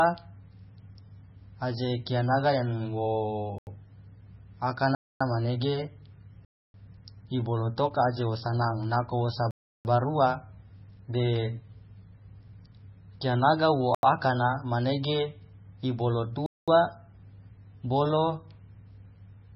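Speech runs the whole way through with heavy MP3 compression, likely from a very low bitrate near 17 kbps. Nothing survives above about 5.6 kHz, and the watery, swirling texture on the remaining sound separates this from a plain low-pass filter. Blocks of digital silence cut in at 3.58, 4.95, 6.45, 9.51, 13.95 and 16.46 s, lasting from 85 to 341 ms. Each drops abruptly to silence, not a fade or a noise-filled gap. The 85 ms holes fit a 4096-sample buffer that was not filled in time.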